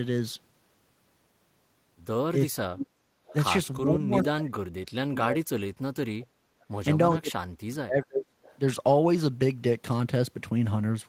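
The speech keeps sinking and breaking up at 2.46 to 2.95 s, 3.82 to 6.34 s, 6.52 to 6.67 s and 7.17 to 8.35 s. It drops by as much as 40 dB or so. This is likely speech suppressed in double talk. The echo canceller seems to have ducked its own talker along with the loudspeaker echo while they overlapped. Two short echo-leak scraps follow at 3.27 to 3.34 s and 8.43 to 8.58 s. Each is a faint copy of the voice, about 25 to 30 dB down. It arrives 392 ms late, likely loudspeaker pickup the far-end canceller missed.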